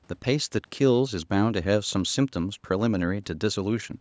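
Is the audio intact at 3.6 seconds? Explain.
Yes, the speech at 3.6 seconds is intact, with only the usual call microphone processing, which trims the lowest bass and leaves nothing above 8 kHz.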